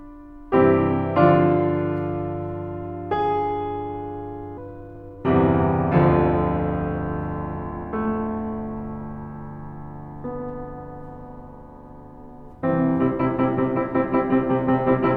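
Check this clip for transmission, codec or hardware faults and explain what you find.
There is one transmission fault in this music clip, a skip ahead at 4.57 s. About 0.7 s of audio is simply absent: playback jumps from one point in the music to a later one with no silence or fill in between. This happens when a run of audio is discarded, for example by a jitter buffer shedding backlog, while later audio is already queued, so the two edges butt together. The result is an abrupt cut where the music lurches forward and loses its continuity.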